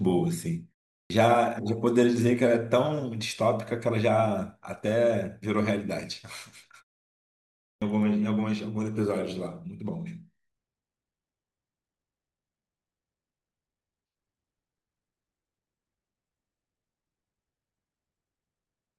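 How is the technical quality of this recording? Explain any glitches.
The recording has two clipped starts after a pause. At 1.05 to 1.10 s and 7.76 to 7.82 s, the output device had dropped into a low-power state during silences of 0.39 s and 1.01 s and was slow to wake. About 51 ms and 57 ms of speech were swallowed, so the sound bursts in abruptly without its opening.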